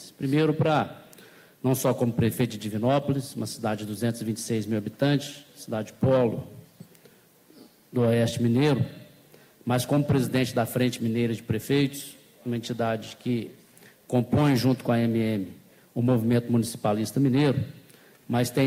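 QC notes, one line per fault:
No faults were heard anywhere in the clip. Nothing in the audio calls for a QC entry.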